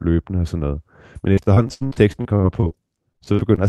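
From 1.33 to 2.72 s the speech turns choppy and robotic. This is repeated packet loss: roughly a dozen short holes, the longest about 69 ms, each patched by stretching the preceding sound, so about a quarter of that stretch is concealment rather than real signal. The same fault returns from 3.12 to 3.59 s, with a handful of gaps up to 47 ms. Above it all, the audio tops out near 12 kHz, which fits a call codec at a moderate bitrate.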